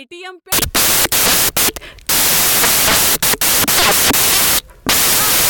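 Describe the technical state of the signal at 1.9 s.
At 1.9 s the signal is inside a stretch of samples built from the wrong bytes, running from 0.52 s to the end. Each sample's bytes are assembled out of order, so the fast-changing low bits dominate, and the speech carries loud, harsh broadband noise.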